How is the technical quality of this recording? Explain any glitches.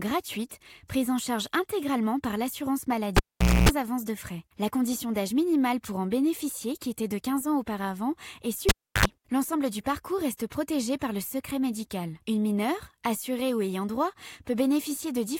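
The recording is marred by two cable pulled and plugged in events. At 3.17 to 3.69 s a pop cuts the sound to near silence for about 475 ms, then a 60 Hz mains buzz of about 260 ms follows as the plug's tip touches first. A second pop brings the audio back. At 8.69 to 9.06 s the same sequence recurs: about 320 ms unplugged, with a briefer 75 ms buzz at 50 Hz. The hum burst and the pops at both ends set this apart from a plain dropout.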